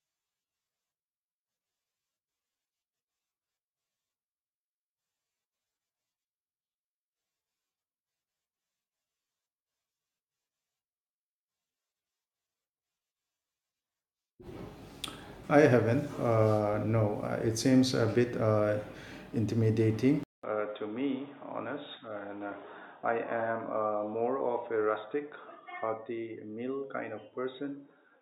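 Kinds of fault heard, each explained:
Input switched to a poorer device: the recording likely changed at 20.23 s to a lower-grade microphone or headset call profile. After a 200 ms gap, nothing above 3.8 kHz remains, the sound falls about 5 dB, turns dull and boxy, and gains faint new background noise.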